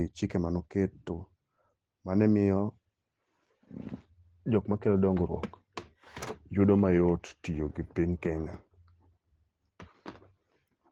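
Throughout, Opus voice compression is plainly audible. The speech has the slightly hoarse, robotic grain of coarse low-rate coding, which fits a bitrate around 16 kbps in hybrid mode, with the upper band coded separately. Unlike a plain low-pass, the band stays open to 18.1 kHz, so it sounds grainy rather than muffled.

From 6.52 to 8.03 s, everything abruptly slows by about 5.9% and drops 104 cents, roughly a semitone, then snaps back. This is likely a drift correction step. Speed and pitch move together in one jump, which sets it apart from gradual wow or a pitch-only shift.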